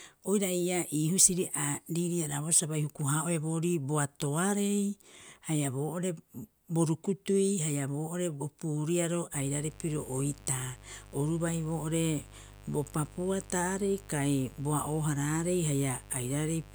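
From 9.32 s to the end, a steady, raspy buzz sits under the speech, about 20 dB below it. This is mains buzz: sharp switching spikes from a dimmer, rectifier or unshielded cable leak in twice per 50 Hz cycle, spraying harmonics up into the kilohertz range.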